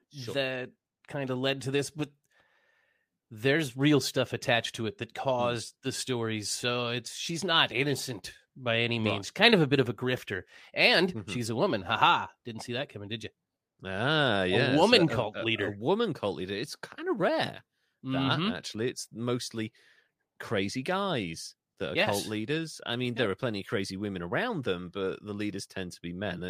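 Nothing in the signal of this speech recording points to a technical fault, as no dropout, distortion, noise burst or timing disturbance can be heard anywhere in it.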